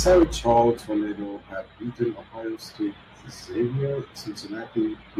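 Right from 0.07 s to 0.61 s there's microphone overload: the loudest peaks run about 5 dB past the converter's ceiling and get their tops sliced flat, roughly one sample in twenty, so those syllables pick up a harsh, crackly edge. The input gain was likely set too high. Then comes a microphone volume stepped down, twice: a drop of about 2 dB at 0.23 s, right in the distorted stretch, and another of about 3 dB at 1.23 s, just before "has beaten". Each time the voice and the background fall together in one sudden step, likely the call software pulling the device's input level down after catching it running hot.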